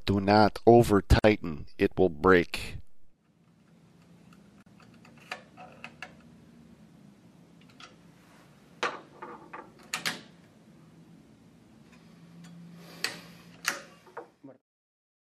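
Two gaps at a join of encoded pieces break the continuous sound: about 50 ms from 1.19 to 1.24 s, and about 38 ms from 4.63 to 4.66 s. Untrimmed encoder start delay and last-frame padding create them. Unlike a dropout, nothing is lost, since the sound resumes exactly where it stopped.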